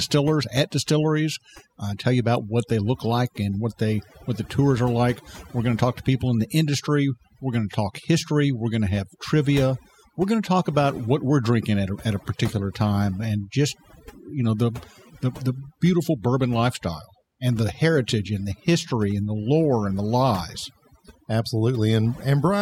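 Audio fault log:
Throughout: overdone noise removal. The noise reduction is set too aggressively, so every frequency band whose level sits close to the estimated noise floor is pulled far down or cut entirely. Low-level parts of the speech fall below that threshold and are removed along with the noise. The background drops and breaks up into brief twinkling specks, and the voice loses its quieter spectral detail.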